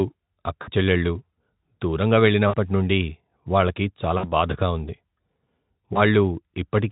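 Brief buzzy, smeared stretches that fade and stay weak afterwards occur at 0.61–0.70, 2.47–2.55 (before "నుండి వాళ్ళకి"), 4.17–4.31 (between "నుండి వాళ్ళకి" and "బాధగా ఉంది") and 5.93–6.01 s. This is VoIP packet loss concealed by the Speex speech codec. It fills gaps of about 60 ms, and 20 ms at the last, by extrapolating earlier sound with falling gain.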